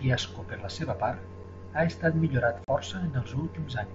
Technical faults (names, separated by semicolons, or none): unconcealed Bluetooth headset packet loss